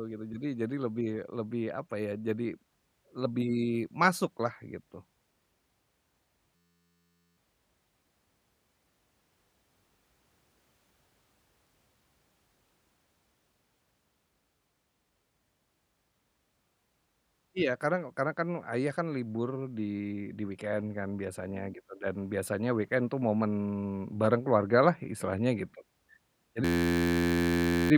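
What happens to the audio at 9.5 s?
Nothing goes wrong at 9.5 s; the speech runs through that moment intact, with no dropout, click or other fault to be heard.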